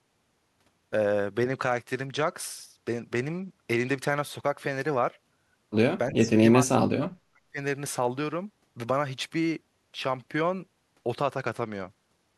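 Speech with two recurring faults. From 1.50 to 4.11 s, and again from 11.39 s to the end, the treble dulls and a gritty noise rises. This is a Bluetooth SBC bit pool drop, and the sound fits a bit pool falling from 28 to 12, near 96 kbps. A spectrogram shows the upper bands thinning out or going empty. From 6.11 to 6.42 s and from 6.61 to 7.59 s the voice sinks by roughly 30 dB and then 40 dB. This is likely speech suppressed in double talk by an echo canceller, and the waveform shows it as deep, ragged dips in the envelope.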